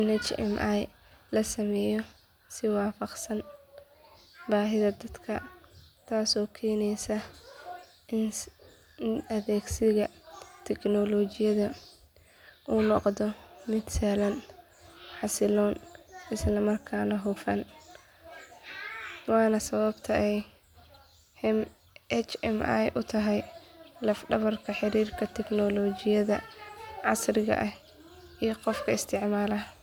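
No technical faults can be heard anywhere in the recording.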